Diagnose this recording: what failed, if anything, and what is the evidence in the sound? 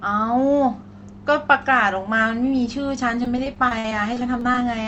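The network stage failed: from 3.23 to 4.62 s, repeated packet loss (robotic sound) left about 15 holes in the speech, the longest 54 ms, with roughly 210 ms missing. The jitter buffer patched each hole by stretching the preceding sound, so this stretch turns choppy with pieces missing, heard through a call codec's band limit near 8 kHz.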